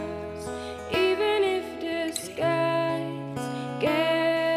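No technical faults can be heard anywhere in the audio. Nothing in it stands out as a problem to mark at any point in time.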